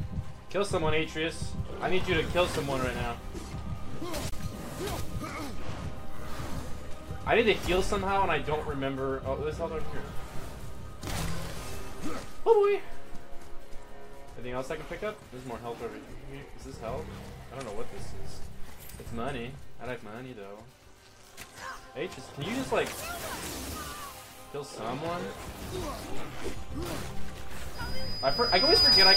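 At about 4.30 s there's a short dropout, a gap at a join of encoded pieces lasting around 27 ms, until roughly 4.32 s. It sounds like the two sides were encoded separately and butted together untrimmed, so the encoder's start-up delay and last-frame padding left a bit of silence in the middle. You hear the sound cut out with slightly softened edges, then pick up exactly where it stopped.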